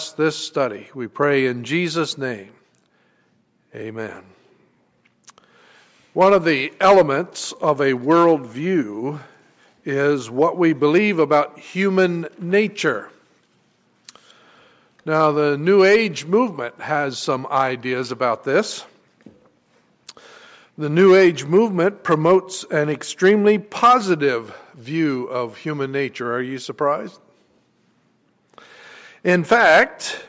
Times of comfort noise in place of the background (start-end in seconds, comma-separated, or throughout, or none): none